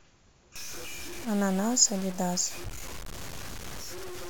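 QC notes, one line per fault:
0.56 s to the end, low bit depth without dither: From 0.56 s the speech turns grainy and harsh. The grit rises and falls with the speech itself. Quiet passages sound rough, and the softest parts sputter or drop out. The likely cause is resolution cut to about 6 bits by truncation, with no dither. The rounding error tracks the signal, so it sounds like distortion rather than steady hiss. It sits only about 15 dB below the speech.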